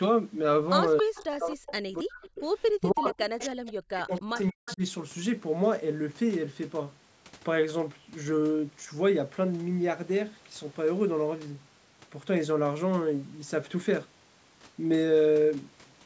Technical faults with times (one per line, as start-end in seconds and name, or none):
0.97-1.24 echo leak
1.02-2.27 speech suppressed in double talk
1.69-1.73 echo leak
2.26-2.42 echo leak
2.76-4.82 speech suppressed in double talk
3.10-3.46 echo leak
4.08-4.76 echo leak